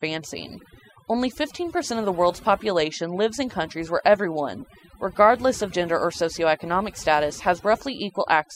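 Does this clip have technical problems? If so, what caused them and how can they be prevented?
Yes, the whole clip suffers from overdone noise removal. A noise reducer was clearly pushed too hard, so any frequency band sitting close to what it judged to be noise gets pulled way down or cut out entirely, and the softer parts of the speech get dragged under with it. That's why the background drops and breaks up into little twinkly specks. To prevent it, use a gentler reduction amount and check the result by ear before committing.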